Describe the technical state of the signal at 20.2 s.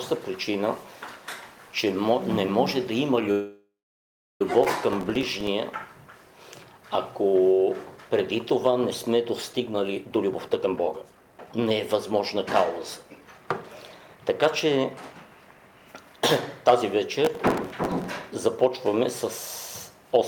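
At 20.2 s the signal is intact, with no audible fault at that moment.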